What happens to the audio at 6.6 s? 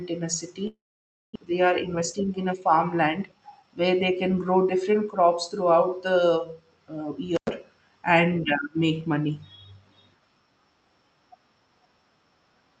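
Nothing goes wrong at 6.6 s: the speech there runs through intact, with only the steady band limit of the Opus call path, which tops out around 8 kHz.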